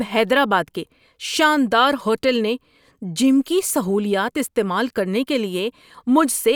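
Nothing technically wrong turns up in this bit of speech, so there's no fault here to pin a time or a cause on.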